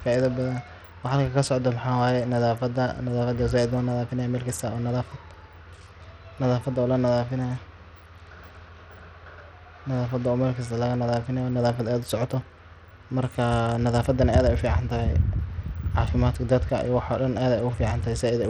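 Throughout the speech, the treble flickers and drops out unevenly while a gritty, coarse noise and some aliasing sit on the sound. The damage is plainly audible. This is likely Bluetooth SBC compression, which fits a small bit pool near 80 kbps: its few wide sub-bands leave the upper bands starved of bits and quantise the rest roughly. Unlike a clean low-pass filter or a perceptual codec's swirly artefacts, the loss here is harsh, grainy and unstable.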